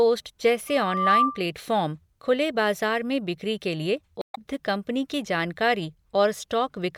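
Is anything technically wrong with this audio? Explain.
Yes, there are two faults. From 0.68 to 1.43 s there is loudspeaker feedback squeal. A microphone picks up its own loudspeaker, and at 1.2 kHz the loop gain exceeds one. That tone swells over roughly 0.4 s into a piercing whistle, about 5 dB above the speech.

From 4.19 to 4.38 s there is damaged data in a compressed stream. It comes right after "में बिक्री के लिए" and before "कंपनी की". Corrupted frames there throw the decoder out of sync while it hunts for the next valid header. The result is a brief garbled glitch.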